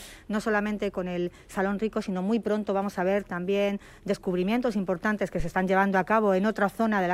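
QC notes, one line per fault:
5.40–5.53 s, phantom power thump: a deep low-frequency thump peaking at about −19 dBFS and dying away in 28 ms. A supply switching on or off on the live input sends a DC step through the coupling capacitors, which the input reproduces as a short bass pulse.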